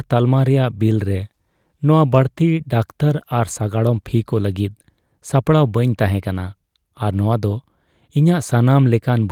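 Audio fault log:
No technical faults are present anywhere in the speech signal.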